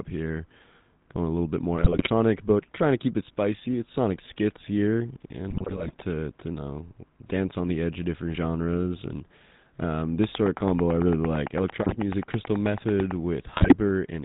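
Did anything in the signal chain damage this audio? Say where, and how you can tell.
Yes. At the codec stage, the whole clip has the buzzy, gravelly texture of the GSM full-rate codec. Nothing is heard above 4 kHz. The coarse, pulse-driven excitation roughens the speech throughout, which points to the 13 kbps GSM full-rate codec at work.

At the network stage, GSM bit errors break the decoded speech into squawks, pops and gargling in four places. The first runs from 1.79 to 2.10 s, between "a little bit" and "but trying to keep". The second runs from 5.50 to 6.03 s, just before "to you know dance". The others fall at 11.82 to 11.96 s and 13.52 to 13.75 s. Corrupted filter, pitch and gain parameters distort each affected frame.

A train of clicks starts after "different genres and um" and runs from 10.24 to 13.12 s. It is about thirty similar pulses at a regular 9 per second, peaking roughly 10 dB above the speech and audible in pauses. 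The likely cause is electrical interference from nearby equipment or a faulty connection or power supply in the analogue wiring.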